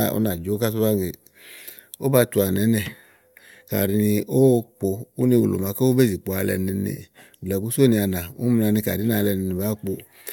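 Across the whole speech recording, no technical fault can be heard. There is no moment in the audio that needs a timestamp.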